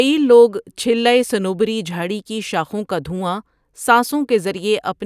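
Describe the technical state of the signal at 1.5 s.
At 1.5 s the speech signal is intact, with no audible fault at that moment.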